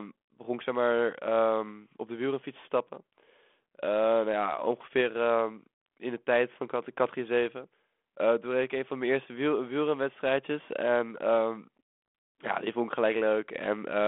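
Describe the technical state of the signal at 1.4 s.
At 1.4 s the signal is intact, with nothing beyond the light coloration of the 32 kbit/s G.726 telephone path and its 250 Hz to 3.4 kHz band.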